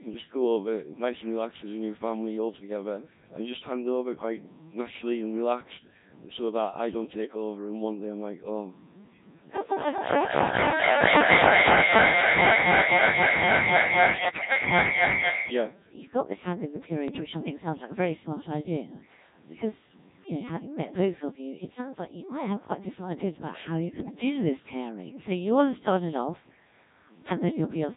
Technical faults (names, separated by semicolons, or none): Codec 2 vocoder; bit errors on digital voice radio